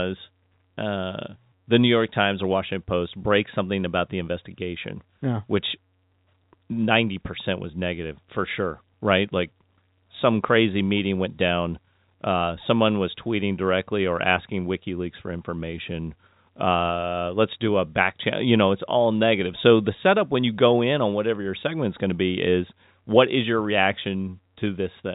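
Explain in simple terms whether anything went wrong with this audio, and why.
Nothing went wrong: the speech arrives through ordinary G.711 telephone coding, which keeps everything up to 3.8 kHz, and no fault turns up anywhere.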